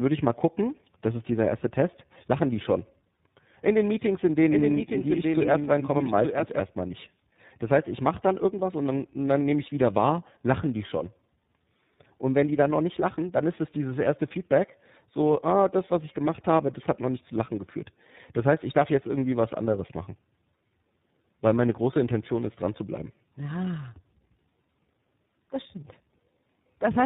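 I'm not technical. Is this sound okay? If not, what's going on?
No. Tandem speech coding runs through the whole clip. The call passed through two different phone speech codecs in a row, with an ordinary uncompressed phone link between them, so the speech was squeezed, unpacked, and squeezed again by a second, different method. Each stage worked on the already damaged result of the one before. That is why the speech sounds rough, muffled and warbly, with nothing above about 3.8 kHz.

A doubled audio track appears from 4.51 to 6.61 seconds. A second copy of the same sound plays about one second behind the first and somewhat quieter, so you hear everything twice, overlapping. This echo has no roominess and no fade. It switches on and off abruptly. The likely cause is the sound being picked up a second time through a slower route, or an edit that left two copies out of step.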